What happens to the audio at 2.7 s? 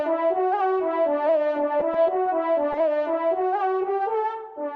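Around 2.72 to 2.76 s there's short concealed packet loss: about 20 ms never arrived, so the receiver extended the preceding sound and blended back, leaving a brief smear.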